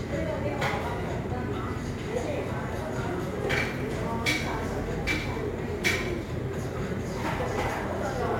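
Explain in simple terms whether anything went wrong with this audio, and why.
Crude rate conversion runs through the whole clip, from the first second to the last. The sound carries a gritty, fizzy buzz that doesn't belong to it and rises with the louder and brighter moments. The recording's speed setting was changed in a cheap way: some samples were simply thrown away instead of being smoothed over. The pattern fits a change from 48 kHz to 44.1 kHz, and that regular skipping adds false tones beneath the sound.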